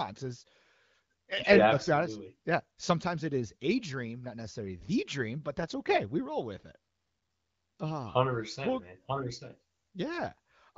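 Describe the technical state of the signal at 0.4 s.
At 0.4 s the speech is intact, carried cleanly through an AMR wideband (HD Voice) path whose clear, band-limited sound fits one of its higher bitrates, with no fault present at that moment.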